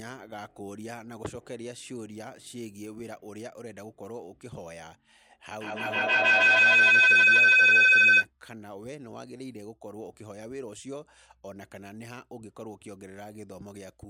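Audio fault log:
5.61–8.30 s feedback howl: a piercing tone around 3 kHz swells to about 21 dB above the speech, the loop repeating roughly every 150 ms, as a microphone-to-loudspeaker loop gains level each pass.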